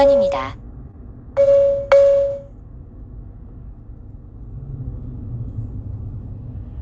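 At 0.91–0.95 s, short concealed packet loss: about 20 ms of audio arrived too late, and the receiver briefly extrapolated the preceding sound, leaving a brief smear before resuming.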